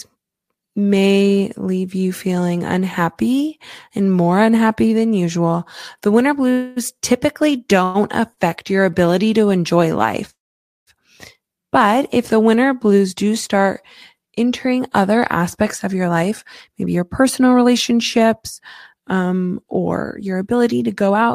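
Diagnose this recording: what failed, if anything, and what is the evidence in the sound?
Call audio freezes at the network and jitter-buffer stage, likely from packets held up in transit until the buffer ran dry. At 6.51–6.78 s and 7.84–7.96 s the last sound carries on as a fading buzz. At 10.30–10.89 s it decays into half a second of silence. The speech then resumes where it stopped, delayed rather than cut.

A short stall from a late packet occurs at 8.33–8.39 s. One packet missed its playout time, so the receiver stretched the preceding sound by about 37 ms until the packet arrived. The speech then continued without loss, leaving one slightly over-held, faintly buzzy sound.

A jitter buffer speed-up runs from 14.65 s to 21.29 s. Having built up excess delay, the receiver trimmed small pitch-period slices again and again, shedding roughly half a second. The speech plays at about 108% speed at unchanged pitch and sounds noticeably hurried.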